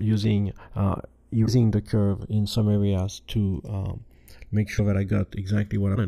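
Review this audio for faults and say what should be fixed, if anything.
The speech has channels drifting apart throughout. The two channels appear to run on clocks that differ by around 100 ppm, so the inter-channel delay slides steadily and reaches well under a millisecond, roughly 0.7 ms, by the end. Summed to mono, the resulting comb notches move slowly through the spectrum and produce a gradual flanging sweep. To prevent it, record both channels from a single clock or resample one to the other's rate before combining.

Short glitches occur at 1.45–1.48 s, 4.77–4.80 s and 5.94–5.97 s. At each point the audio jumps ahead and a brief corrupted stretch of about 30 ms replaces the expected signal. The likely cause is a broken MP3 bit reservoir: frames were dropped, and the following frame, about 26.1 ms long, reached back for data that now belonged to a different frame. To prevent it, cut or splice MP3 streams only after decoding, or use a frame-aware tool that preserves reservoir dependencies.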